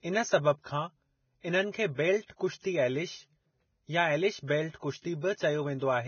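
Throughout the speech, nothing is heard above 6.6 kHz. The treble that remains is hissy and grainy. Consonant attacks smear. This is likely heavy Vorbis compression, which fits a rate near 17 kbps. Fine high detail has been swapped for noise of similar energy.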